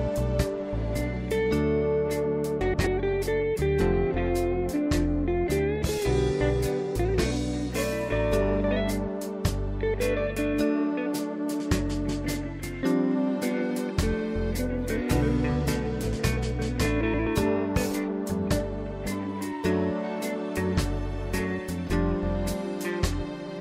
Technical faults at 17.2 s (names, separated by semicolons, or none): frames out of order